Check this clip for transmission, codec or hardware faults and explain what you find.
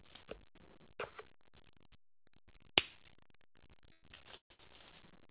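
One fault is audible: repeated stalls (stutter) from 3.92 to 4.61 s. Four gaps were covered by extending the last sound, the longest 140 ms, with nothing lost. Packets arrived late, draining the jitter buffer. The sound drags and stutters, and nearly half of that span is filler. The call path's G.711 A-law coding leaves nothing above 4 kHz.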